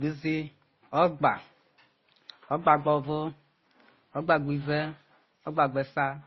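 Throughout the speech, the audio was likely passed through two lossy codecs in turn, transcoding between lossy codecs, with the sound pointing to low-bitrate MP3 followed by Opus. Nothing survives above 5.8 kHz, so it sounds dull, while both codecs' artefacts are heard together.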